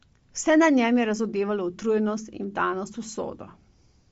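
From start to finish, nothing above about 7.7 kHz survives, and the speech carries a breathy, grainy edge where the upper band sounds noise-filled. That's likely Bluetooth LC3 compression, consistent with roughly 32 kbps in 10 ms frames.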